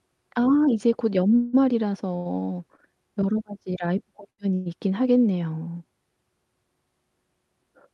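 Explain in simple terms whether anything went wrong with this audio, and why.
Four brief hitches interrupt the speech. None of them removes any of it.

At 1.35 to 1.55 s and again at 4.54 to 4.68 s there is a call audio freeze. The last sound turns into a fading buzz or hiss for a moment, about a fifth of a second the first time, before the speech resumes exactly where it stopped. The likely cause is delayed network packets that left the receiver with nothing to play.

At 2.16 to 2.27 s and 4.30 to 4.40 s there is a short stall from a late packet. Here one sound is simply held a little too long, with a slight buzz or dip, for under a tenth of a second. It is shorter and gentler than a freeze, and the sound doesn't trail off into a fading buzz.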